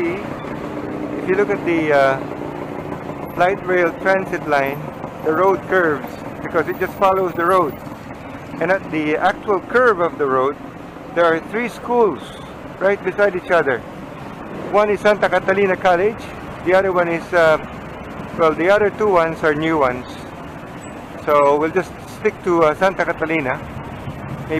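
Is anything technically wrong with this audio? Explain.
No, the signal shows no technical faults anywhere in the recording.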